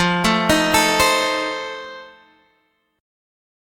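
No technical faults can be heard anywhere in the sound, and the signal holds steady throughout.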